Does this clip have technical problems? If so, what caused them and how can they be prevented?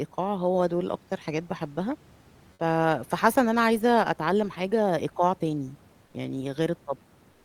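Yes. Comfort noise takes the place of the background twice. From 6.05 to 6.13 s, about 80 ms, the room noise becomes a flat, featureless hiss, about 6 dB quieter. From 7.31 s to the end, about 136 ms, the same swap happens, about 2 dB quieter. The likely cause is discontinuous transmission in the Opus codec. The sender pauses in gaps between speech, and the receiver fills in synthetic noise. Disabling DTX on the sending side prevents this.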